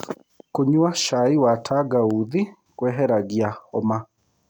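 Nothing goes wrong anywhere in this bit of speech, so there's no technical fault to point to.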